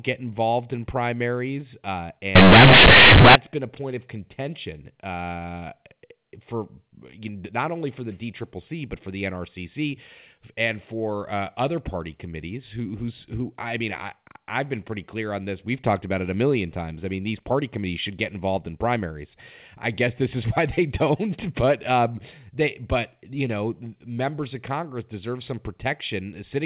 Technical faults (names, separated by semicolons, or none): companded audio read as linear